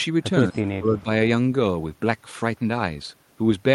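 From 0.47 to 0.62 s there is an echo leak: a faint copy of the speech trailing the original by 135 ms, well below the direct signal, somewhere around 30 dB down. The likely cause is a far-end loudspeaker whose output reached its microphone and was not fully removed by the echo canceller, so part of it returned down the line. A second, even weaker scrap of the same echo, again 135 ms behind, appears between 0.98 and 1.03 s.

Overlapping this, from 0.51 to 1.08 s, the speech is suppressed in double talk. Within that span the level dips in pieces totalling roughly 0.3 s, falling by around 20 dB at the deepest point, so the speech sounds cut and intermittently pulled under. This is likely the canceller mistaking the near talker for echo while both ends were active and attenuating everything it heard.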